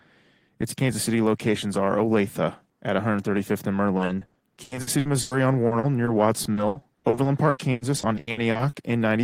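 From 3.97 s to 8.75 s, repeated packet loss (robotic sound) breaks up the speech. Dozens of gaps, the longest 100 ms, are patched by extending the preceding sound, covering about 28% of the stretch. It sounds choppy, with pieces missing, and a spectrogram shows smeared, frozen stretches between abrupt vertical seams.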